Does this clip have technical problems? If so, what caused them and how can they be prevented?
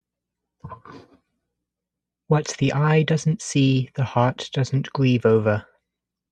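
No, there are no technical problems to report here.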